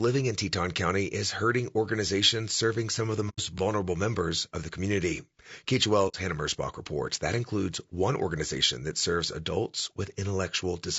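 Throughout, the speech shows the marks of low-delay AAC compression, likely AAC-ELD at a bitrate around 32 kbps. Its short frames resolve the pitch harmonics poorly and run short of bits, so the voice sounds plainly rough and grainy, with noise filling between harmonics and a thin, synthetic top band.

At 3.29 to 3.40 s and again at 6.08 to 6.15 s, AAC frame loss with muting occurs. The decoder zeroed the missing spectrum, about 90 ms and then 60 ms, fitting three and two lost frames. The overlapping windows fade the sound out and back in, leaving soft-edged holes.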